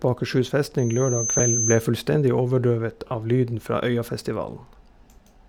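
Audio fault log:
0.78–1.87 s loudspeaker feedback squeal: a pure tone at 6.2 kHz swells over about half a second as the microphone re-amplifies its own loudspeaker output, peaking about 5 dB above the speech. On a spectrogram it is a thin horizontal line that brightens, then stops abruptly.
1.39 s and 3.07–3.11 s lost LE Audio frames: gaps of 10 ms and 40 ms, consistent with one and about four LC3 frames, are concealed by repeating the last spectrum with scrambled phase, so the speech smears into noise. The spectrograms show blurred, texture-less patches, with the longer one fading in level.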